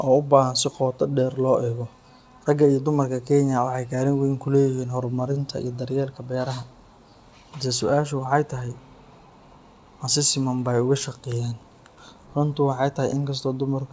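Clock drift between sender and receiver runs through the whole speech clip. The sending end's clock runs about 2% slow against the receiver's, so audio arrives a little too slowly and the jitter buffer keeps drifting toward empty. The receiver has to keep stretching what it has to avoid running dry. The result is a subtle, persistent unsteadiness in pacing rather than any single obvious break.

Repeated timing corrections appear from 0.08 s to 13.58 s, all in the same direction. To cover the slow sender, the receiver repeatedly inserts short duplicated pieces, playing the material at an effective 98% speed. Together these insertions add roughly 300 ms. They are unevenly spaced. This happens over the call codec path, whose content stops at 8 kHz.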